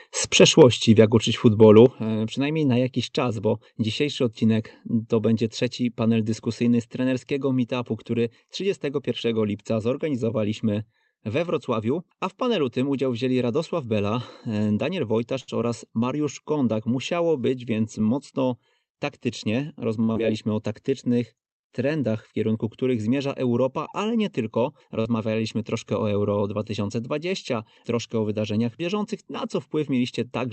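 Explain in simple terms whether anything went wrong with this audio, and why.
Microphone overload at 1.77 to 1.79 s, just before "e przynajmniej na jakiś": a peak slightly exceeded the recording limit, clipping its top and adding a brief harsh crackle, likely from the input level being set too high.

Microphone volume stepped down at 0.62 s and again at 1.86 s, also just before "e przynajmniej na jakiś": the sound suddenly gets quieter, a small drop first and then a much larger one, as the call software likely turned the microphone input down.

Short stall from a late packet at 15.40 s (held about 75 ms) and 20.04 s (about 54 ms): a piece of audio arrived late, so the last sound was stretched until it came. Nothing is lost, but the sound hangs briefly.

Jitter buffer speed-up from 17.49 to 18.44 s: extra delay had built up, so tiny slices were trimmed repeatedly, removing about 70 ms. The speech runs about 7% faster at the same pitch.

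Short concealed packet loss at 20.12 s (about 40 ms missing) and 25.01 s (about 30 ms missing, between "ale nie tylko" and "troszkę o"): the audio never arrived, so the receiver filled each gap by continuing the previous sound, leaving a brief smear.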